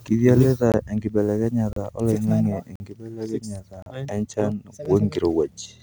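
At 0.72 s, 1.73 to 1.76 s, 2.76 to 2.80 s, 3.82 to 3.86 s and 4.85 s the speech breaks off into brief hard-edged holes, a gap between stream segments recurring roughly once per second. Adjacent one-second segments were timestamped slightly apart, so the player inserts silence ranging from about 5 to 45 ms. On a waveform each appears as a flat-line notch; a spectrogram shows a clean vertical blank stripe across all frequencies.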